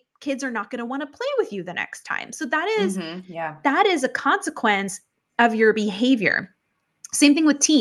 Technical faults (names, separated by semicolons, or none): automatic gain rising